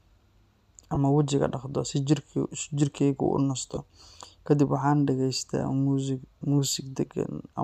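At 0.95 s and again from 3.75 to 3.77 s there are lost LE Audio frames. The likely LC3 decoder fills each short gap with recycled spectrum, so the speech smears briefly into a grainy blur.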